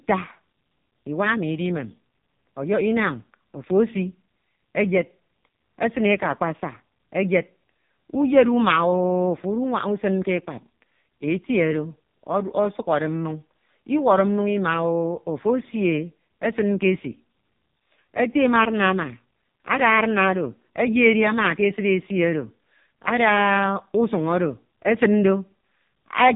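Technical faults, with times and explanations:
Throughout: AMR narrowband mobile codec. Nothing passes above 3.8 kHz, so a spectrogram shows a hard ceiling with empty space above it. The speech sounds heavily buzzy and synthetic because the vocal-tract model gets very few pulses, which fits AMR-NB's lowest modes, near 5 kbps.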